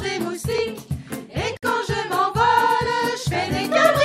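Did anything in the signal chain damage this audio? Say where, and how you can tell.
Yes. Loud pop at 0.58 to 0.60 s: a single sharp pulse about 5 dB above the sound, likely a voltage step from analogue wiring, such as a plug or switch.

Gap at a join of encoded pieces at 1.57 to 1.63 s: a 57 ms gap with smeared edges, from encoder start delay and end padding left in when separately encoded pieces were joined.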